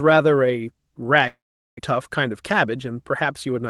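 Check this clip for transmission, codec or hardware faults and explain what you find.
Two faults stand out in this speech clip, both from the network side of a call path whose Opus-style coding keeps content up to about 12 kHz.

From 1.27 to 1.81 s there is a long network dropout, likely caused by a gap in packet arrival. The receiver stretches the last sound into a fading buzz or hiss, then leaves near-silence for about 0.41 s. Roughly 0.4 s of speech never returns. On a spectrogram, smeared harmonics fade into an empty band. On the waveform, the envelope decays into a flat stretch.

From 2.65 to 3.67 s a jitter buffer speed-up drains excess buffered delay by repeatedly cutting out pieces of one or a few pitch periods, removing about 70 ms in all. The speech plays about 6% faster at unchanged pitch and sounds slightly hurried. A spectrogram shows harmonics at normal spacing but syllables packed closer. 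The waveform shows shortened voiced stretches with small splice points between periods.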